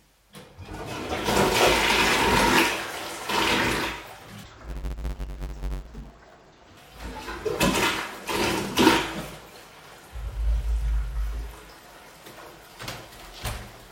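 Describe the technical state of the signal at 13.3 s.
At 13.3 s the audio is intact, with no technical fault present at that moment.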